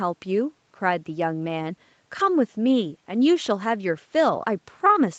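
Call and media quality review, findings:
Lost packet rebuilt from error correction, 2.19–2.29 s: Opus frames dropped and replaced by lower-bitrate in-band FEC copies, which fits about three packets. No gap, but speech turns briefly rougher and noisier.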